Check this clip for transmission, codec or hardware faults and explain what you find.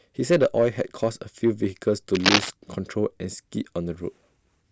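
One hardware fault is audible in this speech clip: cable scratch noise from 2.15 to 2.52 s. A loose or worn cable or connector being moved is the likely cause, its contact resistance jumping erratically and injecting ragged bursts of noise, heard as scratching roughly as loud as the speech. A spectrogram would show dense broadband vertical smears there; the waveform, jagged spikes.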